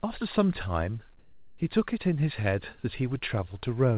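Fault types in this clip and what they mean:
Comfort noise in place of the background: from 1.19 to 1.58 s, a pause of about 390 ms loses its real background, sitting about 30 dB below the loudest sound, and gets a smooth, featureless hiss at the same level, likely from discontinuous transmission, with the receiver synthesizing noise (RFC 3389 style). Unlike a noise gate or dropout, the pause never goes silent, and the patch sits within the 4 kHz-limited band of the call audio.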